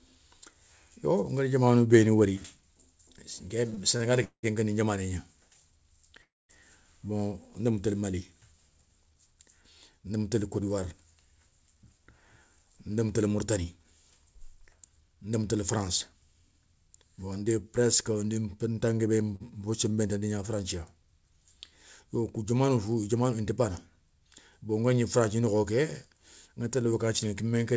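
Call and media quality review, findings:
Repeated stalls (stutter), 3.70–4.45 s: four gaps, about 270 ms filled in total (longest 188 ms, roughly a third of the span). Jitter buffer ran dry repeatedly as packets came late. Receiver extended the last sound each time, so nothing is lost but the audio drags. Waveform shows held, repeating periods. Spectrogram shows smeared horizontal bands.

Call audio freeze, 6.22–6.51 s: audio halts for 271 ms, of which 220 ms is silent, then resumes where it stopped. Likely packets held in transit, emptying the jitter buffer. Short fading buzz or hiss, then a flat gap in the waveform and a blank column on the spectrogram.

Jitter buffer speed-up, 11.69–15.54 s: audio runs about 7% fast at unchanged pitch and sounds hurried. Buffer was over target and trimmed pitch-period-sized pieces, roughly 0.3 s in all. Waveform shows whole cycles cut out. Spectrogram harmonics stay level while events crowd together.

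Short stall from a late packet, 19.36 s: a sound is held for 42 ms with a slight buzz or dip. One packet was missing when due, so the receiver stretched the previous audio until it arrived. Brief flattened stretch in the waveform, with a slight smear on the spectrogram.

Call path: band limit at 8 kHz, visible as a hard spectrogram ceiling, fits a wideband codec such as G.722.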